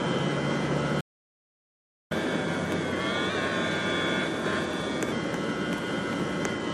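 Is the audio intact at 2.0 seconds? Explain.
No. At 2.0 s the audio sits inside a playback stall running from 1.00 to 2.12 s, about 1.1 s of silence. The player likely ran out of data or was blocked, so sound halts mid-flow, showing as a flat waveform and an empty spectrogram band before resuming.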